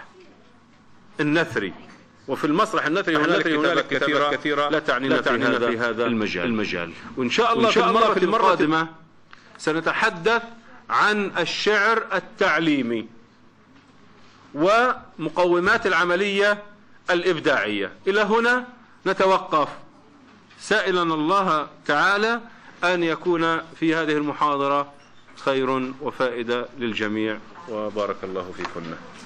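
From 3.15 to 8.63 s a doubled audio track appears: an equally loud, dry copy trails roughly 0.4 s behind, likely from a second, slower capture path.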